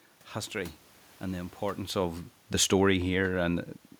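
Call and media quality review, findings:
Automatic gain falling, 2.53–3.66 s, just after "and the importance of": level drops by about 3 dB over roughly 1.1 s, room noise sinking with it. Probable component: capture-side AGC, reducing gain after judging input too loud or background noise too strong. The room noise throughout and the level change near 1.5 s from the talker moving are acoustic, not system faults.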